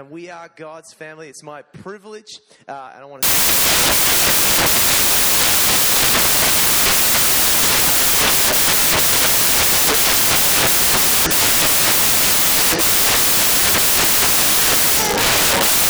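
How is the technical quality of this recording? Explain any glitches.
Poor: from 3.23 s to the end at 15.89 s, the audio is corrupted by samples built from the wrong bytes. The decoder assembles each sample's bytes in the wrong order or alignment, so the rapidly changing low bits become the dominant part of every value. The result is loud, harsh broadband noise, close to white on the louder passages.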